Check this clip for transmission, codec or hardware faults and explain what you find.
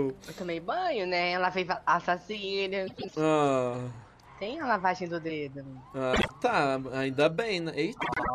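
Three short stretches have frames out of order: 2.87 to 3.15 s, 6.13 to 6.30 s and 8.01 to 8.30 s. In each, two adjacent runs of coded frames were swapped before decoding, so the sound plays back-half-first with nothing lost. The swapped blocks are about 104 ms long at the first and last events and about 52 ms at the middle one, which fits runs of four and two frames. Each stretch is heard as a garbled flutter. On a waveform or spectrogram the content on either side of the seams is visibly transposed.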